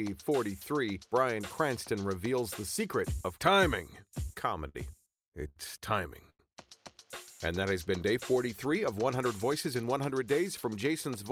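Four short stalls from late packets come first, at 4.33, 4.69, 5.48 and 6.30 s. Each time, the jitter buffer ran dry and the last sound was held for 29, 55, 73 and 93 ms. Nothing is lost, but each sound hangs with a faint buzz or dip.

A jitter buffer speed-up follows from 8.49 to 9.76 s. The receiver cut out many tiny pitch-period pieces to shed excess delay, about a tenth of a second in all. The sound runs at 107% speed, unchanged in pitch, and feels hurried.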